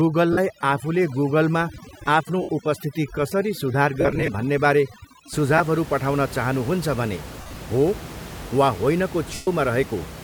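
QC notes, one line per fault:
0.0–5.33 s, overdone noise removal: an over-strong noise reducer pulls bands near its noise estimate down to nothing, leaving twinkling specks in near-silence.
0.33–0.38, 2.42–2.49, 4.01–4.28, 5.58–5.61, 7.41–7.56 and 9.34–9.48 s, lost LE Audio frames: dropped frames, which fits 7.5 ms frames, make the decoder repeat the last spectrum with random signs. Tones smear into noise. The 127.5 ms gap at 9.34 s fades toward silence. The 4.01 s and 7.41 s events are scattered losses with runs of around 40 to 50 ms.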